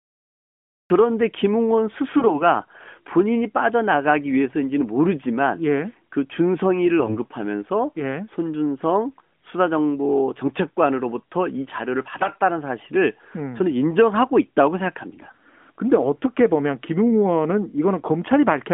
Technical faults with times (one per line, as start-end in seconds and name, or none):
0.00-0.90 cut-off start
7.00-7.18 AMR bit errors
12.18-12.38 AMR bit errors
15.20-15.35 AMR bit errors